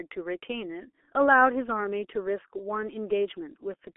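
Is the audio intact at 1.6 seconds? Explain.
No. At 1.6 seconds the speech is degraded by the G.723.1 codec, which runs through the whole clip rather than as a brief event. Nothing above 3.8 kHz survives, and the usable band sits within 300 Hz to 3.4 kHz, so the sound is muffled. The hoarse texture and smeared consonants fit a very low bitrate near 6 kbit/s, 30 ms frames and a voice model that updates slowly. Plain band-limiting would dull the sound without that roughness.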